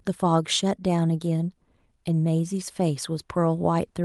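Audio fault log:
No fault to log in this speech clip.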